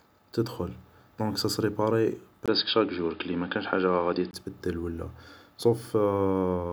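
A speech recording turns dull and boxy from 2.46 to 4.33 s, with nothing above 5.1 kHz, a 20 ms gap at the switch, a level shift of roughly 5 dB and faint new background noise. The input likely switched to a poorer device.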